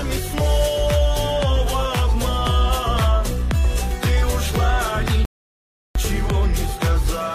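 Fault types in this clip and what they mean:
Rebuffering stall: the player ran dry of downloaded audio, so the sound drops to silence at 5.25 s and picks up exactly where it left off at 5.95 s, adding 0.7 s.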